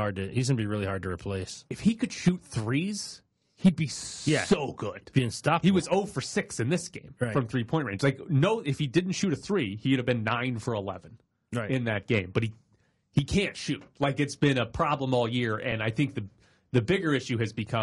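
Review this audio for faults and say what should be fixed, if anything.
Low-delay AAC compression runs through the whole speech clip. The voice sounds rough and grainy, and the damage is plainly audible. Noise fills the gaps between the pitch harmonics. The top band sounds thin and synthetic. The likely cause is a low-delay AAC codec such as AAC-ELD. Its short frames resolve harmonics poorly, and the degree of damage fits a low bitrate around 32 kbps. Prevent it by encoding at a higher bitrate or using a codec with longer frames.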